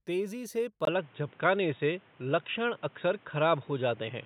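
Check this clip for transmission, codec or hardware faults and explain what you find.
One fault stands out, from 0.85 s to the end of the speech. After a brief gap of about 20 ms, the sound turns dull and boxy, with nothing above 3.8 kHz, a level shift of about 5 dB and new background noise roughly 30 dB down. The likely cause is the input switched to a poorer device, whose narrower band, own gain and own noise replace the original microphone's.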